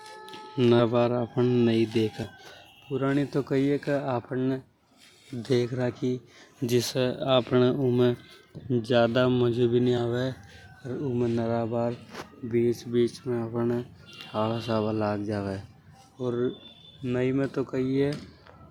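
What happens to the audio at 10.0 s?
At 9.97 s, compressed frames are skipped: about two 20 ms frames, around 40 ms, drop out, so the audio jumps ahead by that much, leaving a discontinuity in waveform and spectrogram.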